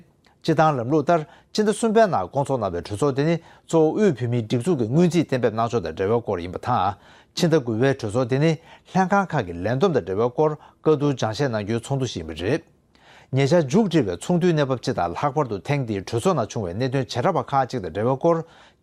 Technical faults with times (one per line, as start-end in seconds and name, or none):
none